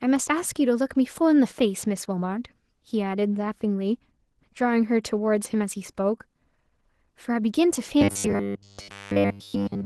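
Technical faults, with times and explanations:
Throughout: Opus voice compression, hoarse, muffled and faintly robotic everywhere, consistent with roughly 16 kbps hybrid coding. The steady texture sets it apart from the later fixed-pitch buzz.
8.01 to 9.85 s: robotic sound from repeated short buffers, a rigid metallic 100 Hz buzz, likely from 10 ms chunks being repeated while most of the real audio is skipped.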